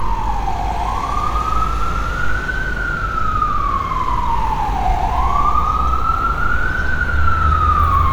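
No technical faults can be heard anywhere in these sounds. Nothing in the recording breaks up, drops out or distorts at any point.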